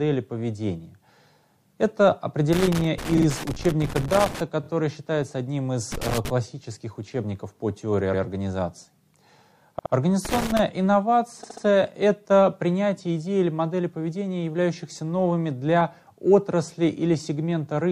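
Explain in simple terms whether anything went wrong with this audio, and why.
Bursts of scratchy crackling break into the sound from 2.53 to 4.41 s, 5.92 to 6.30 s and 10.25 to 10.59 s. This is loose connector crackle: a worn or dirty contact keeps cutting the signal in and out.

The sound also stutters, replaying tiny slices of about 23 to 93 ms at 3.16, 4.62, 8.13, 9.78 and 11.43 s. These are repeated frames: the same short chunk of audio was stored or sent more than once, so it plays again.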